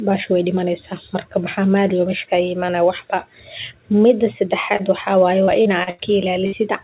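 At 4.76 s the speech briefly smears for about 30 ms, ending by 4.82 s. This is short concealed packet loss: that slice of audio arrived too late to decode, so the receiver extended the preceding sound and then blended back into the real signal.

From 5.45 to 6.01 s the speech turns choppy. This is repeated packet loss. Four separate gaps totalling about 180 ms, the longest 86 ms, were each patched by continuing the last sound. Synthetic fill makes up roughly a third of that stretch.

At 6.46 s a sound hangs and fades for 60 ms before the speech picks up again at 6.55 s. This burst of packet loss dropped consecutive audio. The receiver prolonged the last sound while attenuating it, so the material that belonged in that gap never plays. All of this sits on a narrowband call path with nothing above 4 kHz, which fits a G.711-style telephone codec.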